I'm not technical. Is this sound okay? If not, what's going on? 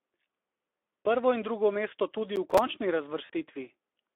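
No. Three things went wrong.

Throughout, the speech was squeezed through the Speex codec, an older internet-calling format, at a low quality setting and over a narrow, telephone-like range. Too little detail survives, so the voice sounds noisy and hoarse the whole way through.

From 2.36 to 2.58 s there is processor overload crackle. The computer got too busy to deliver its tiny chunks of sound, each about 5 ms long, on time. Around seven went missing over that stretch and left brief silent gaps, which you hear as a burst of gritty crackling.

At 3.25 to 3.30 s, VoIP packet loss concealed by the speech codec: two pieces of the call, 40 ms in total, never arrived. The decoder guessed by stretching the last bit of voice, so that moment turns briefly buzzy or noisy and fades, staying weak just afterward.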